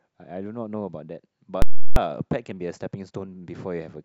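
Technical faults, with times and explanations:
1.62 to 1.96 s, invalid numbers at full scale: a calculation produced invalid values that were pinned to maximum level for about 0.34 s, which fits a 16384-sample block, so a loud pop marks each edge with no speech between.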